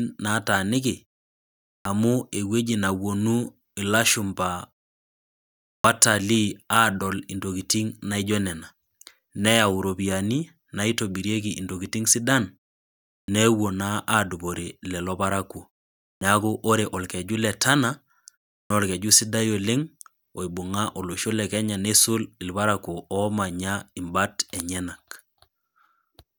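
Speech with a clipped start after a pause at 1.81, 5.80, 13.24, 16.17 and 18.66 s. About 43 ms of each opening sound is missing after silences of 0.37 to 1.15 s, as the output device sleeps and wakes late. Unlike muted pauses, actual speech is lost.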